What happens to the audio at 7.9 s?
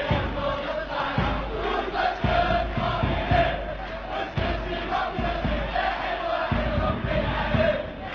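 Nothing goes wrong at 7.9 s; the audio plays through that moment intact, with no dropout, click or distortion.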